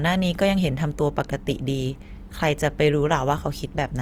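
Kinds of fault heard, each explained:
Opus compression: likely a bit-starved Opus encoder in CELT mode, fitting about 24 kbps, refilling bands, so the speech sounds plainly grainy and rough despite reaching 20.3 kHz.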